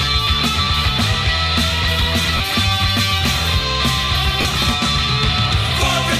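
At 2.37 s and 4.41 s, lost LE Audio frames leave 30 ms and 40 ms gaps. The decoder refills each gap with the last spectrum at randomised phase, heard as brief noisy smears and seen as smeared, featureless spectrogram patches.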